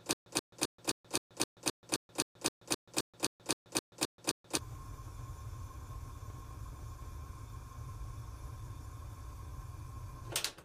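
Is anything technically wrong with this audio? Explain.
Yes. From the very start until 4.57 s there is stutter with silent gaps: a 131 ms burst repeats 17 times, each followed by 131 ms of dead silence, a 261 ms cycle. A stalled player or stream likely replayed its last fragment at each retry, losing the audio in between.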